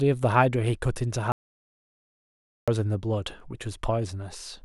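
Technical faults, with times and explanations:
1.32–2.68 s audio dropout to silence: speech cuts off abruptly into silence for 1.36 s, likely a lost input. The waveform goes dead flat and the spectrogram shows a completely blank gap.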